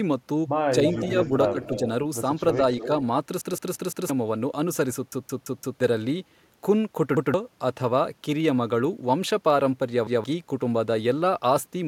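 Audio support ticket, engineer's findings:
Echo leak, likely far-end canceller residue: voice returns about 300 ms late, at about 5 dB below speech at 0.86–1.29 s, then about 10 dB down at 1.48–1.79 s and 2.79–2.88 s.

Speech suppressed in double talk, likely canceller misjudging near talker as echo: brief dips of about 10 dB at 0.98–1.15 s, about 5 dB at 1.53–1.58 s and 1.83–1.87 s.

Repeated buffer, playout underrun: same 171 ms chunk replayed with hard joins, four extra times at 3.41–4.10 s and 5.12–5.80 s, once at 7.17–7.34 s and 10.07–10.24 s. Fits an 8192-sample buffer.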